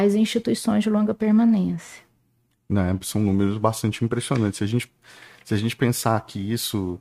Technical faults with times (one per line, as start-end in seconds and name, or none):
none